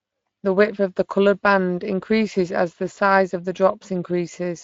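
It's a short speech clip, and the whole thing carries plainly audible Speex codec damage from start to finish. Speex is an old CELP codec from VoIP and game chat, and here it's clearly short of bits for the excitation, so the speech comes out grainy and hoarse. The degree of damage fits a middling quality setting, somewhere around 20 kbps.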